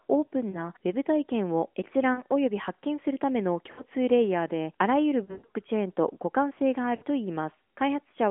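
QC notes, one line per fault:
0.50–0.69, 2.14–2.22, 3.72–3.84, 5.24–5.46 and 6.96–7.03 s: lost AMR speech frames. Each gap fits two or three missing 20 ms frames, except 5.24–5.46 s, where losses scatter with a 120 ms run. The narrowband decoder repeats the last pitch and tract settings at falling gain, so the sound smears, warbles and fades.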